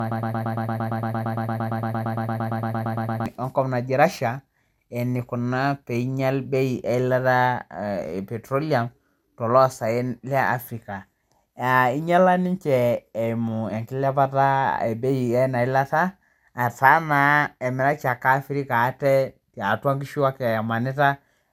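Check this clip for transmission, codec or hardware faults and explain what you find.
Two faults are present: a repeating loop at the very start, and cumulative codec damage across the whole recording.

Broken-record loop, 0.0 to 3.26 s: the clip opens mid-loop, with a fragment of about 114 ms repeating exactly, back to back, roughly 27 times before normal playback resumes. The likely cause is a stalled player, encoder or stream that kept resending its last buffered fragment. The result is a rapid, mechanical stutter, and whatever audio belonged in those three seconds is missing.

Generation loss, throughout: the speech has a swirly, hollow, smeared quality, with consonant onsets blurred and nothing above 17.4 kHz. The character points to MP2 at around 128 kbit/s, decoded and re-encoded about four times. Each pass requantises on a shifted frame grid, so noise and spectral gaps accumulate beyond what a single encode at that bitrate would leave.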